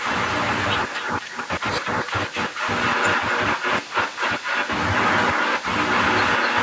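From 0 to 0.18 s, 0.37 to 1.49 s and 1.78 s onward, an echo leak repeats the speech 0.25 s late, first about 5 dB quieter, then matching it. Likely an echo canceller missed loudspeaker pickup. Spectrograms show syllables duplicated, offset 0.25 s.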